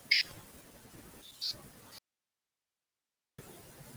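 Noise suppressor artifacts run through the whole recording. The suppressor judges which frequency bands hold steady noise and turns them down frame by frame. The background therefore dips in gaps and swells under the speech. This is most noticeable once the room noise rises by about 13 dB near 2.5 s. That noise still sits about 11 dB below the speech.

Speech cut by the noise suppressor is also present from the very start to the very end. The suppressor mistakes parts of the speech for noise and lowers them along with the background. At its deepest the cut is about 21 dB. Soft consonants and word endings sound swallowed or faint. Quieter stretches lose body. The whole clip is affected, so the speech never sounds fully intact.

An audio dropout to a faint residue begins at 1.99 s and lasts until 3.38 s, about 1.4 s in all. The speech cuts out abruptly rather than fading. The gap holds only hiss, far below the normal signal level. 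The speech then snaps back in mid-flow. The likely cause is a loss of the wanted signal while the path after the break stayed live and passed its own hiss.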